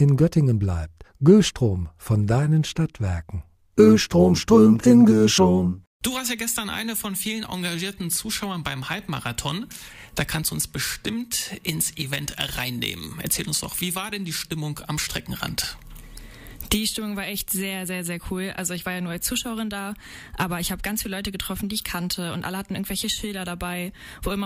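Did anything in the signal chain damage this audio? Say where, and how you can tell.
No, nothing in the signal chain audibly damaged this audio.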